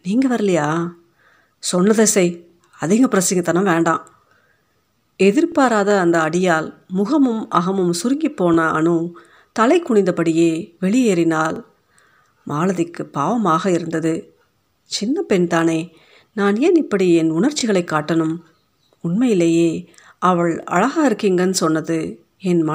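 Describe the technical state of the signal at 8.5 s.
A brief click-like stutter from 8.54 to 8.56 s comes from overlapping chunks: a new 3 s chunk starts early, so 21.3 ms of speech plays twice.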